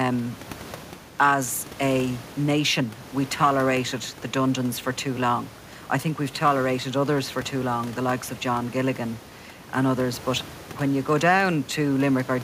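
Nothing is technically wrong with this speech clip; the room noise underneath sits about 20 dB below the speech and belongs to the recording itself.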